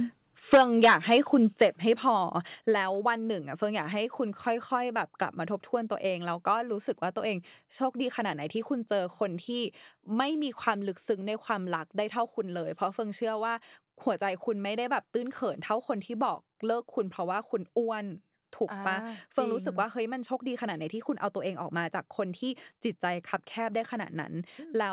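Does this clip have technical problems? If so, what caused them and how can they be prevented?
Yes. The first problem is microphone overload. From 0.53 to 1.17 s, the loudest syllables crunch and crackle. A shorter burst follows at 1.61 to 1.64 s. The peaks are flattened at the converter's ceiling, about 9 dB over in the first stretch and about 4 dB in the second. Around 7 percent of the samples there are cut off. The likely cause is an input volume set too high for this talker. Lowering the microphone gain before the call, so peaks stay well below full scale, would prevent it.

The second problem is the microphone volume being stepped down. The speech and its background drop suddenly in level at 0.54, 1.53, 2.55 and 10.71 s. The drops are about 2, 5, 4 and 2 dB. The first comes right as the overload begins, and the next two follow the distorted peaks. This is likely the call software's automatic gain control reacting to the clipping by cutting the device input in steps. 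It sits on a telephone-band path with nothing above 4 kHz, which fits G.711 mu-law. Setting a sensible fixed input level, or turning off automatic gain adjustment, would prevent these jumps.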